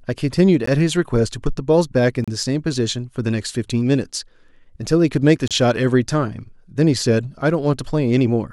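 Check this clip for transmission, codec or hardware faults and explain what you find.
One fault recurs in the speech: three brief cuts to silence, at 0.66 s (16 ms), from 2.24 to 2.28 s (33 ms), and from 5.48 to 5.51 s (30 ms). Each time the speech drops out abruptly and then resumes. The likely cause is a Bluetooth stall. Interference held up packets, the headphones' buffer emptied, and playback paused until the retransmitted audio arrived.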